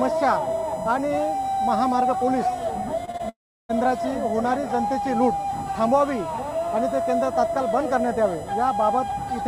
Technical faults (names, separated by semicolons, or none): USB whine; short concealed packet loss; long network dropout